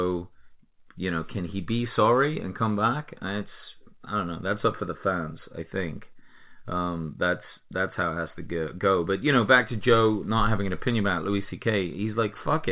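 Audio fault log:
No faults logged; the speech carries nothing above 4 kHz, which fits a 64 kbps G.711 mu-law call path working as expected.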